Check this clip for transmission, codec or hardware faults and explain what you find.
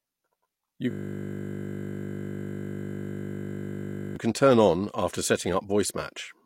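One fault is present, a system hang loop running from 0.91 s to 4.16 s. The computer or audio driver stopped supplying new samples while the sound hardware kept reading the same 20 ms stretch of its ring buffer, replaying it over and over. Because the looped piece is so short, it repeats 50 times a second, and the speech collapses into a steady 50 Hz buzz lasting about 3.25 s before normal audio resumes.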